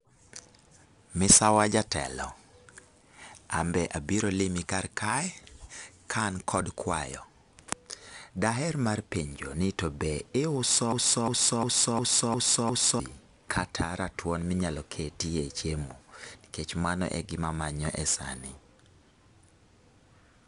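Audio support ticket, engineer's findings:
4-bit ADPCM compression, full length: gritty hiss riding on every loud passage, harsh grain on sharp speech attacks, plainly audible, no content above 10.6 kHz. Coarse 4-bit steps from a predictor leave level-tracking error, which fits a stream near 89 kbps.

Broken-record loop, 10.92–13.00 s: after "ni to be iuso", a 354 ms fragment repeats back to back six times, then resumes at "kata ratuon minyalo ketie". Likely a stalled player or stream resending its last buffer; the speech for that span is lost.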